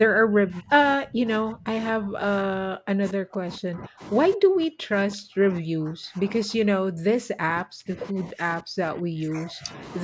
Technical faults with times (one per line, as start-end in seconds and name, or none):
0.00-0.71 speech suppressed in double talk
0.97-4.02 speech suppressed in double talk
4.35-9.81 speech suppressed in double talk